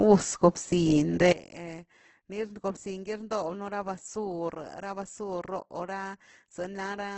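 From the start and throughout, the speech carries heavy damage from what is likely Opus compression in its music mode: nothing above 8.1 kHz, and tones turned rough and grainy rather than swirling, since bands are filled instead of emptied. That points to a low bitrate near 12 kbps.

At 1.32 s comes a sudden gain jump. The level drops by about 17 dB from one sample to the next and stays down to the end. Background noise falls together with the speech and there is no ramp, which rules out a fade or compressor. The likely cause is a gain setting applied unsmoothed.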